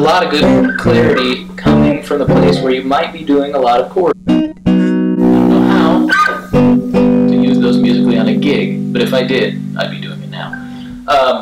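From start to finish the audio suffers hard clipping: it is pushed about 13 dB past what the stage can pass, so roughly a fifteenth of the samples hit the ceiling. Waveform peaks show flat tops, and spectrograms show harmonic smear reaching high up, heard as harsh fuzz on loud moments.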